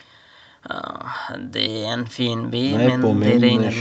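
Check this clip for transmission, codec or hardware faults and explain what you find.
No transmission, codec or hardware faults.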